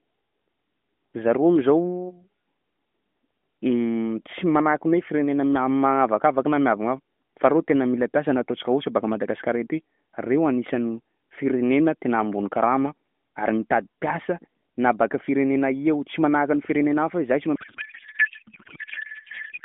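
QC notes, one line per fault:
17.56–19.65 s, codec payload misread: after "hafa hoe zay tsy", speech becomes garbled warbling noise, which fits octet-aligned AMR frames unpacked as bandwidth-efficient, scrambling every field.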